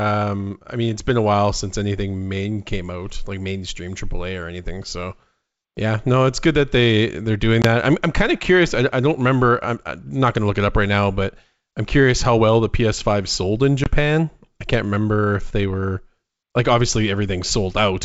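At 7.62 to 7.66 s, between "that they they're doing" and "I'm I'm kind of", and again at 13.84 to 13.90 s, just after "sold in", there is packet loss on an ADPCM call. About 20 ms of audio, which fits a single lost packet, drops to hard-edged silence. Unlike a plain dropout, the sound comes back slightly distorted. This happens because the decoder's adaptive predictor and step size no longer match the sender's, and it settles within tens of milliseconds.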